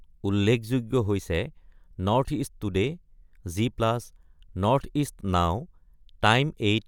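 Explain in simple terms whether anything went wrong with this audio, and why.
Something did go wrong at 2.87 seconds in this speech recording: a single sharp tick, known as a bit error spike. For an instant, one tiny piece of the digital data flipped, so the sound's level jumped for a few samples and then snapped straight back. A dropout leaves a short gap of silence, and a mouth click follows the speech itself. This tick is instant and spread across all pitches, with nothing missing around it.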